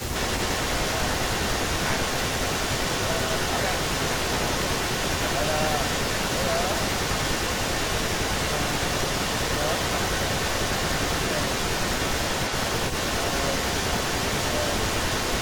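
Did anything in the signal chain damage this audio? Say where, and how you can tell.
Yes: an echo leak runs from 0 to 15.4 s, a copy of the speech trailing about 0.4 s behind and roughly as loud as the original. This points to call processing, likely a far-end loudspeaker whose echo canceller failed to remove the pickup before sending it back.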